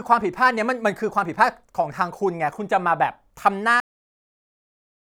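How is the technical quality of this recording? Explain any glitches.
The recording has one clear glitch, a cut-off end. At 3.80 s the speech stops mid-sound and drops instantly to digital silence. The final stretch of audio was never written out, so nothing decays. On a waveform the trace collapses to a flat line, and a spectrogram shows a sharp vertical edge followed by blank.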